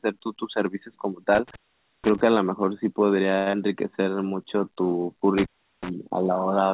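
From 1.35 to 2.21 s the speech cuts out for about 0.48 s, with crackle at each edge and faint hiss in the gap. This is intermittent contact: a loose cable or plug briefly opened the line. At 3.38 to 3.48 s a sound is held for 82 ms with a slight buzz, then resumes where it left off with nothing lost. That is a short stall from a late packet: the jitter buffer ran dry, so the receiver stretched the last sound until the packet arrived. At 3.50 to 3.55 s comes a brief smear where 60 ms of audio is gone and 29 ms of synthesized continuation bridges the hole, with the delay shrinking by roughly 30 ms. This is short concealed packet loss, where the decoder extended the previous sound before blending back. From 3.92 to 4.16 s the speech drags at about 85% speed without any change in pitch, as a jitter buffer slow-down repeats pitch periods to add 45 ms of reserve. From 5.38 to 5.90 s intermittent contact recurs, opening the line for about 0.37 s with crackle at the edges. 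Throughout, the call path carries nothing above 4 kHz, which fits a narrowband telephone codec.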